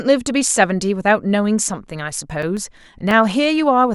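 From 2.30 s to 3.38 s the speech carries CD scratch ticks: five short, evenly spaced clicks, the longest lasting a few milliseconds. A blemish on the disc surface wipes out more data than the error correction can reconstruct, and it passes under the laser once per revolution. Each time, the player conceals the damaged samples by interpolating or muting them, which leaves a brief tick roughly four times a second.

At 2.42 s, inside that stretch of ticks, there is a block of digital silence lasting 5.8 ms, which fits a 256-sample buffer that was not filled in time and was output as zeros. The signal drops straight to silence and returns with no fade, so each edge is a hard discontinuity. At this length the gap is heard as a single sharp tick or dip rather than an audible hole.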